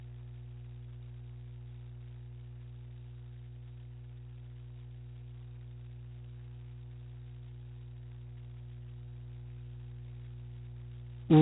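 From start to finish the speech sits on a mains hum, a steady low tone at 60 Hz with a few low harmonics above it. Earth-loop or transformer pickup from the power line has leaked into the signal, and it is loud, only about 10 dB below the speech. Unlike rumble or handling noise, it holds one fixed pitch and never changes with what is being said. It stays just as strong in the pauses as under the words.

Running through the whole clip as well is G.726 ADPCM coding at 16 kbit/s, where each sample is stored as a very coarse 2-bit step from a predicted value. The damage is heavy: nothing above 3.9 kHz survives, so the sound is telephone-narrow, and a harsh, rasping hiss rides on the speech. What separates this from simple band-limiting or a steady noise floor is that the grit swells on loud syllables and falls away as the level drops.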